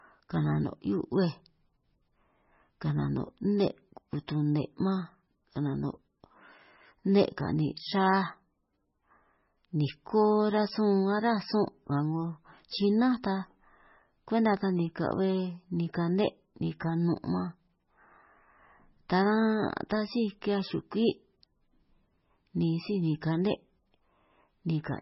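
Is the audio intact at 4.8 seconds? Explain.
No. Heavy MP3 compression, likely from a very low bitrate, runs throughout. It cuts everything above 5.6 kHz and makes the starved speech sound watery and swirly.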